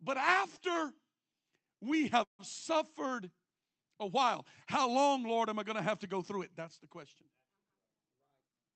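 From 2.23 to 2.41 s, a call audio freeze stretches the speech into a fading buzz and then silence, likely from jitter-buffer starvation. Unlike a dropout, it resumes where it stopped, with nothing cut.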